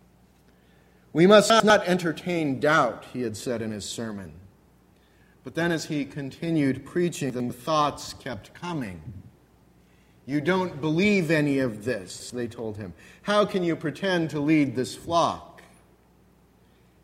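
A short audio recording, with chunks out of order at three points: 1.5 to 1.7 s, 7.3 to 7.5 s and 12.1 to 12.3 s. Each time, two 100 ms blocks play in swapped order. One block arrived a single chunk late and was played after the one that should follow it. Nothing is missing. Each swap leaves a brief jumbled stutter with three hard joins.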